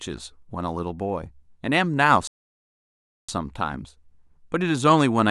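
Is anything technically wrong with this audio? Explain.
Yes. From 2.27 to 3.29 s the speech cuts to silence for about 1.01 s, a playback stall. The player was likely starved of data or had its output thread blocked, so it produced nothing until it recovered.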